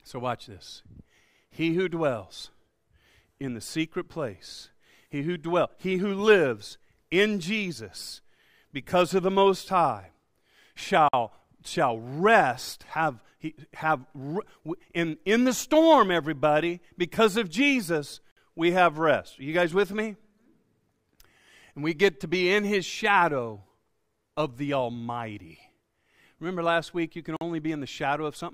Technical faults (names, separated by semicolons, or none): gap at a join of encoded pieces